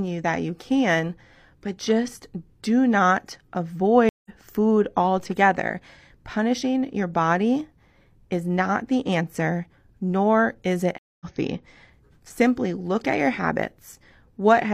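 At 4.09 s a stream reconnect interrupts the speech. There are about 0.16 s of silence, and then the audio resumes roughly 150 ms further along, as a freshly started decoder picks up mid-stream. On a spectrogram this shows as a blank vertical gap, with the harmonic traces jumping rather than continuing across it.

At 5.18 s a DC step shifts the waveform's zero line, heard as a low thump while the speech carries on unchanged. The waveform's baseline visibly jumps and then sags back toward centre within a fraction of a second, pulled back by a high-pass near 2 Hz.

Just after "answer nor is it", at 10.98 s, a second reconnect leaves 0.22 s of silence and resumes about 300 ms later, with another clean blank band on the spectrogram.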